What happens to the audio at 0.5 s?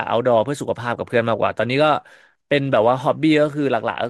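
Nothing goes wrong at 0.5 s: the speech plays through that moment intact, with no dropout, click, glitch or distortion.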